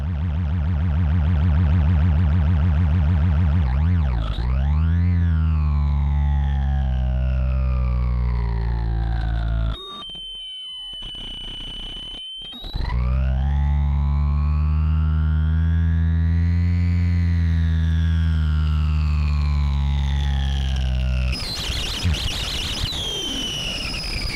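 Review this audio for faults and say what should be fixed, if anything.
No faults; nothing to fix.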